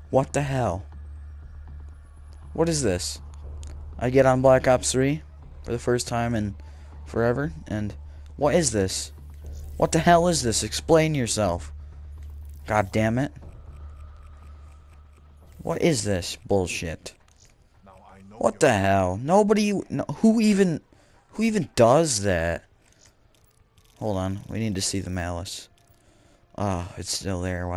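Nothing technically wrong turns up anywhere in this one, so there's no fault to report.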